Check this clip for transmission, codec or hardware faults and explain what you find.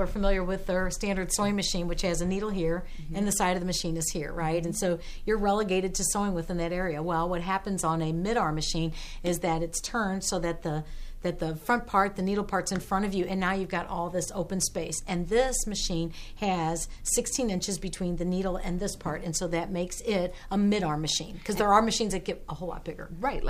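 There is one fault, sample clock jitter, running throughout. An unsteady converter clock, around 3 µs RMS, mistimes samples. This adds a rough hiss roughly 30 dB below the signal, loudest on high, steep passages.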